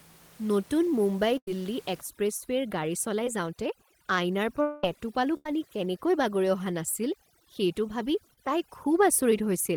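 Speech with two bursts of packet loss, at 1.37–1.48 s and 5.37–5.47 s. In these, roughly 0.1 s and 0.07 s of audio went missing, and the receiver stretched the last sound into a fading buzz or hiss before the audio resumed further on. On a spectrogram these look like smeared, repeated harmonics that dim before the real speech returns. Short concealed packet loss appears at 3.25–3.27 s and 8.34–8.38 s. Gaps of about 10 and 40 ms were patched by extrapolating the preceding sound, giving a brief smear or wobble that shows as a small blurred patch or a slight kink in the waveform. From 4.62 to 4.84 s the sound turns into a held buzz or hiss that fades for about 0.21 s without ever reaching silence, and then the speech comes back with a stretch missing. The likely cause is a long network dropout, and the spectrogram shows a decaying, frozen spectrum across that span. From 2.01 s to the end, overdone noise removal is at work. 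The room noise, about 26 dB below the speech, is pushed to near silence with twinkling specks, visible on a spectrogram as isolated bright dots on a dark background and ragged, holed harmonics.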